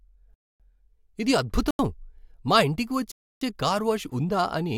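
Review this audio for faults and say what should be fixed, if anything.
Block of digital silence at 1.71 to 1.79 s and again at 3.12 to 3.41 s in this speech. The audio drops abruptly to silence and returns with no fade. The first hole lasts 85 ms, which fits an unfilled 4096-sample output buffer. The second, at 298 ms, is a longer hole. Prevent it by enlarging the output buffer or fixing the processing so every block is filled on time.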